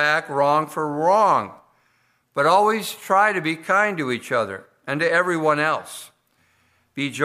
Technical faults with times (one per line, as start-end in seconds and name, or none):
none